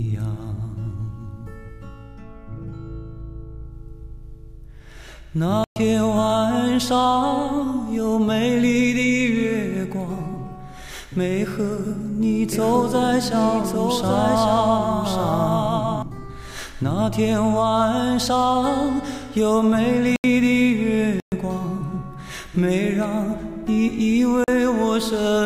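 Four blocks of digital silence cut the audio at 5.64–5.76 s (120 ms), 20.16–20.24 s (80 ms), 21.2–21.32 s (120 ms) and 24.44–24.48 s (40 ms). The sound drops to silence and returns with no fade, which sets these apart from gentler concealed or faded dropouts. From 12.52 to 16.02 s a doubled audio track is heard: a full-band copy about 5 dB quieter runs roughly a second behind and starts and stops abruptly. It has no decay or room colouring, so it is not an acoustic echo or reverb. The likely cause is a second, slower capture path mixed in.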